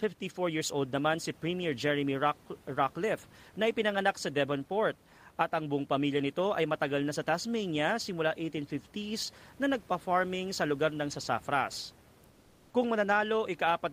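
Speech recording with comfort noise in place of the background from 12.30 to 12.73 s, where the room noise, about 31 dB below the speech, turns steady, featureless and about 3 dB quieter, likely from discontinuous transmission such as Opus DTX; a noise gate would leave silence instead.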